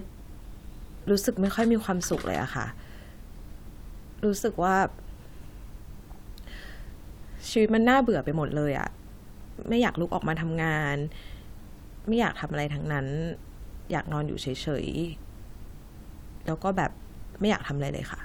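Nothing in this speech recording jumps out as a technical fault, so there's nothing here to flag.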